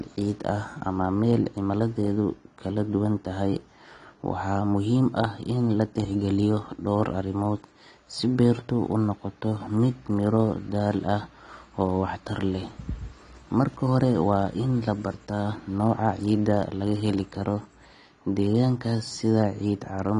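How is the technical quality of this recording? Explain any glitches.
The recording is held back by audible codec damage. Throughout, the sound is dull, with nothing above 10.1 kHz and a smeared, warbling fizz on sibilants. This is likely AAC compression, consistent with AAC-LC at a low bitrate around 32 kbps, where the encoder lowers the cut-off and coarse quantisation leaves holes in the spectrum.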